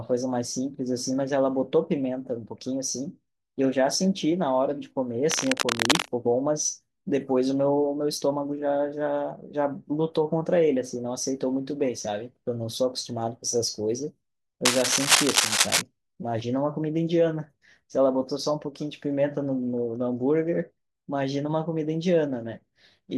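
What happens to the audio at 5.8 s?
Around 5.8 s the speech is covered by cable scratch noise, running from about 5.29 s to 6.10 s. Dense, irregular bursts of scratching and rustling sit at roughly the same level as the speech. The likely cause is a worn cable or connector being moved, so its contact resistance jumps about rapidly. A clean dropout or a single click would be an isolated event. This is a continuous, uneven crackle spread over most of a second.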